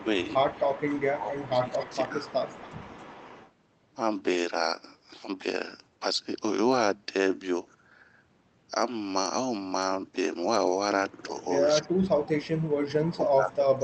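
Echo leak runs from 0.24 to 1.1 s, returns briefly at 1.45 s and from 1.78 to 1.96 s, then runs from 2.24 to 3.51 s. A faint copy of the speech trails the original by about 0.28 s, sitting roughly 20 dB below it, dipping to about 25 dB at 1.45 s and rising to about 15 dB at 1.78 s. This is likely a loudspeaker on the far end whose echo canceller let part of the microphone pickup through and sent it back.

Speech suppressed in double talk begins at 1.11 s and lasts to 2.19 s, overlapping the echo bursts. For roughly 0.7 s in that span the level sags by about 10 dB. It returns far more heavily from 11.8 to 12.19 s, with a drop of about 40 dB, and from 13.06 s to the end, about 35 dB down. The likely cause is an echo canceller that could not tell its own talker from loudspeaker echo while both sides spoke and turned everything down.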